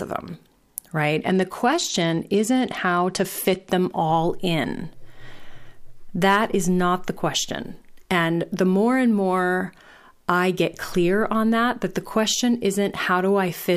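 A Bluetooth SBC bit pool drop runs from 1.16 to 3.69 s and ends just before "them all in". The link ran short of capacity, so the encoder spent far fewer bits on each block of audio. The highest sub-bands were starved and the rest were quantised coarsely. The speech loses its treble and turns dull, with a gritty noise riding underneath. The degradation fits a bit pool cut from 31 to 13, near 94 kbps.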